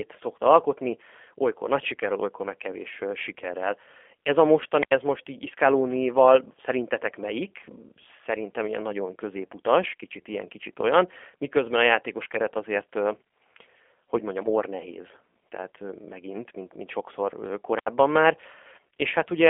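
Speech runs through the G.729 codec for the whole clip. It sounds rough and synthetic, with nothing above 3.5 kHz and an 8 kbit/s telephone band. At 4.78 to 4.91 s, a wireless microphone squelch dropout brings a burst of hiss, then about 79 ms of near silence, before "ez most így". The radio signal faded and the receiver's squelch muted it.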